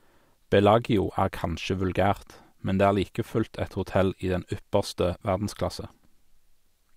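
From 3.74 s to the end of the speech, sample clock jitter sets in: the converter's clock wanders by around a microsecond and a half, so each sample lands slightly off time. Because the timing error scales with how fast the waveform is changing, a fine hiss roughly 45 dB below the signal rides on loud, bright syllables and drops away in pauses. On a spectrogram this shows as a faint broadband haze, densest above a few kHz, that follows the speech energy.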